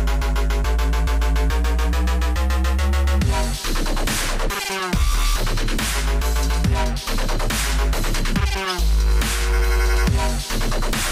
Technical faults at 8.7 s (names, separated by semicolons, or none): corrupt frame decoded